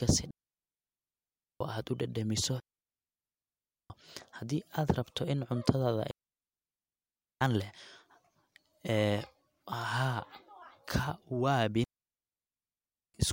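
At 0.31 s the speech drops into a clean hole of near silence, lasting 1.3 s until 1.61 s. This is a digital wireless dropout. The receiver lost too much data and muted itself with a very fast fade. No noise burst comes before or after. The same 1.3 s mute returns from 2.60 to 3.90 s, from 6.11 to 7.41 s, and from 11.84 to 13.14 s.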